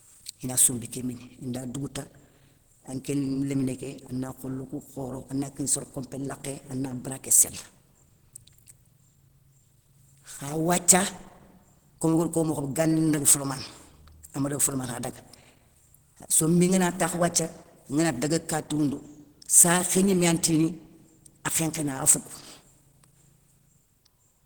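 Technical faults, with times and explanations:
throughout Opus compression: a starved bitrate likely pushed the encoder into hybrid speech mode, so the speech sounds plainly hoarse and grainy, which fits about 16 kbps.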